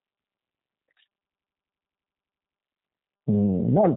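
It's a short speech clip, and the whole thing carries the sound of the G.729 codec, most likely the G.729A variant at 8 kbit/s. Everything stops at about 3.8 kHz, so it's dull and boxy. On top of that you get a rough, slightly synthetic edge, because the codec rebuilds the voice from a vocal tract model, a pitch predictor and a few pulses per frame instead of the actual waveform, and that damage is plainly audible. Then from 1.28 to 2.56 s there's a system hang loop. The machine or driver froze while the audio hardware kept replaying the same ring buffer, so a single 85 ms chunk repeats fifteen times at about 11.7 Hz. That gives a machine-gun stutter rather than a steady buzz, and the length fits a 4096-sample buffer. Playback then picks up with hardly any audio missing.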